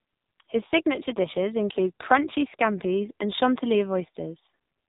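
Throughout, the speech has gone through the AMR narrowband mobile codec at a low rate that fits the 5.9 kbps mode. Each 20 ms frame is rebuilt from a vocal-tract model and sparse pulses, so nothing above about 3.8 kHz survives and the voice sounds heavily buzzy and synthetic.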